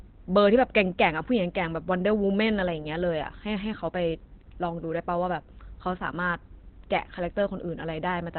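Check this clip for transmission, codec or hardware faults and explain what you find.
One codec fault runs through the whole recording. Opus compression, likely in its speech mode at a very low bitrate, strips everything above 4.4 kHz and coarsely models what remains, leaving muffled, hoarse speech. A spectrogram shows a flat ceiling at 4.4 kHz with blurred, smeared harmonics below it.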